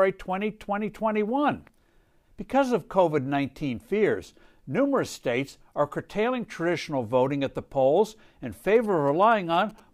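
From 8.75 s to 9.80 s, just after "at the polls in", GSM signalling bursts break into the speech. A nearby 2G handset exchanging signalling with the network transmits short groups of radio bursts, and the audio circuitry rectifies that RF into the signal path. The result is a galloping dit-dit-dit of brief buzzes repeating at about 217 Hz, sitting roughly 25 dB below the speech and lasting about a second.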